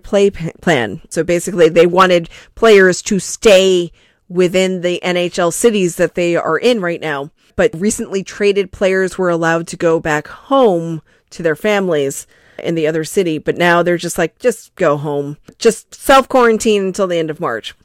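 Hard clipping runs throughout the speech, driven about 4 dB past the ceiling. Roughly one percent of samples are flattened, giving crackle on peaks, squared waveform tops, and high-frequency spectrogram smearing.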